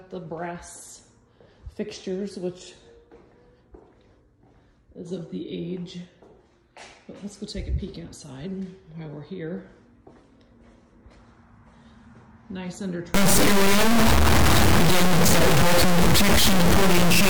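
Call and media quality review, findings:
Stuck bit, 13.14 s to end of clip (17.29 s). Symptom: buzzy distortion on all material from onset, noise filling pauses. Component: likely a broken data line or converter bit held at fixed value. Mechanism: bit weight about -10 dBFS, so roughly half of samples offset by that step depending on waveform, plus flips at small-value sign changes, high enough to be loud in quiet gaps.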